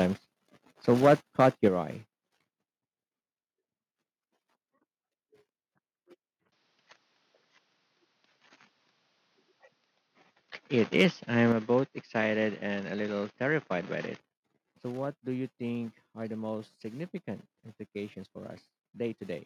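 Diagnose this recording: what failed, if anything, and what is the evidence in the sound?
Microphone overload at the converter: harsh, flat-topped crackle on the peaks from 0.88 to 1.68 s and again from 10.99 to 11.05 s. Input gain was likely about 7 dB, then about 5 dB, too hot.

Microphone volume stepped down right after the clipping: the whole level drops about 6 dB at 1.68 s and about 5 dB at 11.52 s. That's likely call processing pulling the input gain back.

Input switched to a poorer device from 6.52 to 14.2 s, with no gap at the changeover. The band narrows, the tone goes dull, and the level shifts by roughly 5 dB. The system likely swapped to another microphone or a headset profile.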